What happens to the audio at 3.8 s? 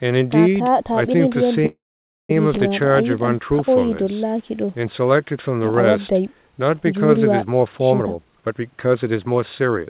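Nothing goes wrong at 3.8 s: the speech carries on intact, band-limited to nothing above 4 kHz, which fits a G.711 mu-law call path.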